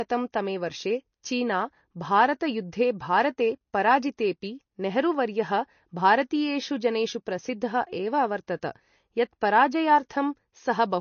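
Throughout the speech, the treble stops dead at 6.6 kHz and weak detail flickers in and out, giving a watery, swirly quality with chirpy s sounds. This is likely MP3 compression at a low bitrate near 32 kbps. A spectrogram shows a flat ceiling with speckled gaps below it.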